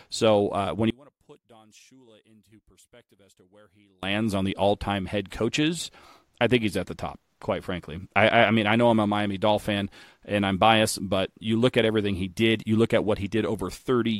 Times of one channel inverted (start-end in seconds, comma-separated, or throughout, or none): 0.90-4.03